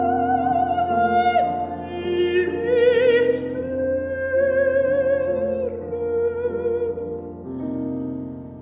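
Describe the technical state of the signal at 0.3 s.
The signal at 0.3 s is intact, with no dropout, distortion, glitch or other fault audible at that moment.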